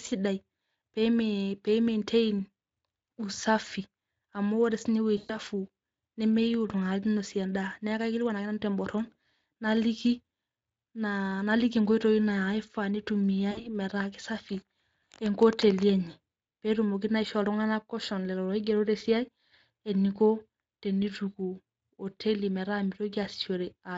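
At 5.17 s, just after "ore sii ninye", VoIP packet loss concealed by the speech codec briefly replaces the speech. About 120 ms of audio is missing, which fits six 20 ms frames. The decoder extends its last pitch and filter into a buzzy tone or coloured noise that fades, until about 5.36 s. A shorter gap of about 60 ms, from 13.51 to 13.75 s, gives the same smeared, decaying fill. The Speex coding underneath is light.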